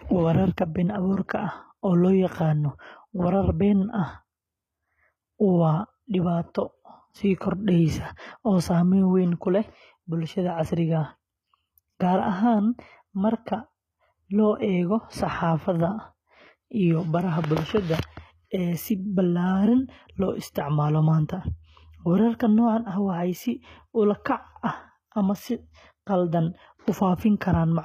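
Speech with HE-AAC compression throughout. The treble above 14.9 kHz is gone. The rebuilt highs sound gritty and metallic, likely from a low bitrate around 20 kbps.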